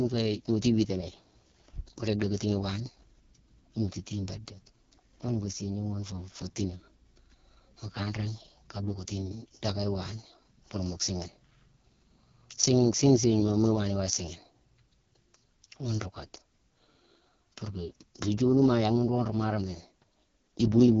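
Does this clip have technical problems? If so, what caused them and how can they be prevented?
Yes. Throughout, the speech sounds rough and raspy, with nothing above 6.8 kHz. This is heavy AMR wideband (HD Voice) codec damage: its pulse-driven vocal tract model runs short of bits, which fits the lowest 6.6 kbit/s mode. Using 12.65 kbit/s or higher prevents it.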